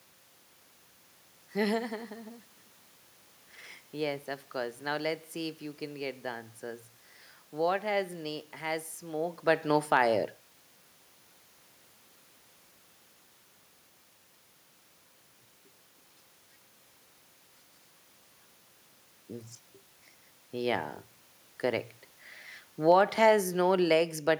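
Automatic gain falling, 22.75 to 24.28 s: the gain control judged the input too loud or its background noise too strong and backed off about 4 dB, sinking speech and background together.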